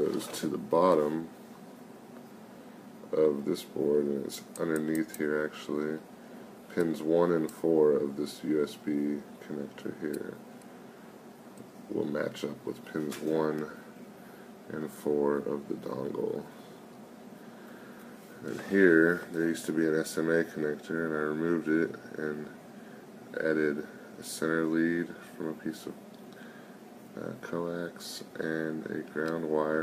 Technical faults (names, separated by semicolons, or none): none